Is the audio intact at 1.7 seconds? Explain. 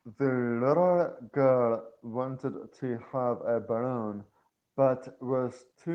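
Yes, at 1.7 seconds the speech plays through cleanly, with no dropout, click, distortion or other fault.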